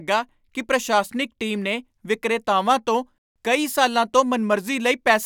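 No technical faults can be heard in this recording of speech. Nothing stands out at any moment that would call for comment.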